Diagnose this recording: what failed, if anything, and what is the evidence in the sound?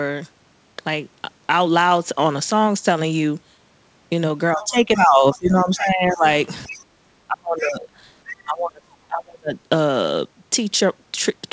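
The likely failure is in call processing: the echo canceller lost track during double talk and suppressed speech along with the loudspeaker echo. The speech dips at 4.54–6.25 s and 6.67–6.87 s by about 15 dB, and harder at 7.27–7.88 s and 8.44–9.54 s by about 30 dB. The canceller misjudged the near talker as echo while the other side was active, so its gain was pulled down.

The same echo canceller likely left residual echo, so the other side's voice leaks through in short scraps. These fragments come at 4.61–4.67 s (about 20 dB below the speech), 6.74–6.84 s (about 25 dB below), 7.63–7.70 s and 8.27–8.34 s (both about 15 dB below). They overlap or sit between the suppressed stretches. Part of the loudspeaker signal reached the microphone and escaped cancellation, so bits of a second voice ride under the talker. All of this passes through a G.722 call path with nothing above 8 kHz.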